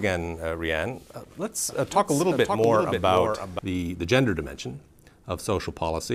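From 1.69 to 3.59 s a doubled audio track appears: a full-band copy trails by about half a second, roughly 5 dB quieter, likely from a second capture path or misaligned edit. Waveform and spectrogram show every event repeated, starting and stopping abruptly.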